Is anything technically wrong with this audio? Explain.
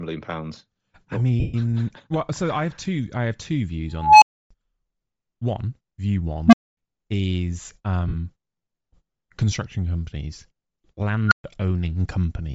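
Yes. Throughout the speech there is a breathy, grainy edge with a noise-filled, thin upper band. This is likely Bluetooth LC3 compression at a low bitrate, around 32 kbps with 7.5 ms frames. The codec discards upper spectral detail and substitutes shaped noise.

Lost LE Audio frames occur at 1.40–1.55 s (135 ms) and 8.08–8.15 s (52.5 ms), consistent with 18 and 7 missing frames. The decoder repeats the last spectrum with randomised signs, so the sound briefly turns into a noisy smear.

An unstable filter fires three times. From 3.98 to 4.51 s a tone near 1 kHz swells over 241 ms, clips, then drops to 288 ms of silence. From 6.47 to 6.77 s a tone near 200 Hz builds in 62 ms, followed by 245 ms of silence. From 11.27 to 11.44 s a tone near 1.5 kHz builds in 43 ms, followed by 128 ms of silence. Each time, bad recursive coefficients let the output grow until it overflows and mutes before the filter resets.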